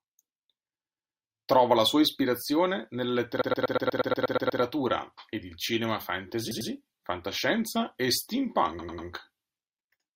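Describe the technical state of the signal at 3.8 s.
At 3.8 s the speech is caught in a stutter: right after "la sua ispirazione nella", the same 120 ms fragment loops over and over from 3.41 to 4.61 s, with ten extra plays before the sound moves on. This is repeated frames. A short run of compressed frames, which fits a block of about five frames, was written or delivered more than once, so the decoder played it again and again, lengthening the audio by 1.2 s.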